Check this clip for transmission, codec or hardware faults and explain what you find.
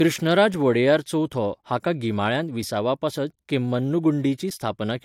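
One codec fault runs through the whole speech clip: low-bitrate audio saved at a high bitrate. The band is empty above 16.6 kHz, and the leftover artefacts point to a low-bitrate first encoding, likely around 64 kbit/s AAC, later re-saved as high-rate MP3. Re-encoding cannot restore what the first pass removed. A genuine high-rate encode would keep more top end and sound clean.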